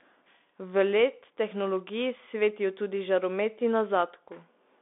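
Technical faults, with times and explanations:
Throughout, Bluetooth CVSD headset codec: speech is squeezed into a narrow band of roughly 250 Hz to 3.6 kHz. One-bit slope coding adds granular hiss, scratchy s sounds and overload distortion.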